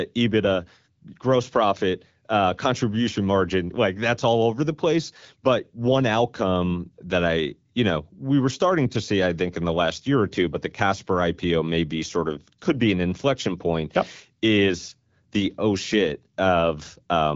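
No technical faults are audible.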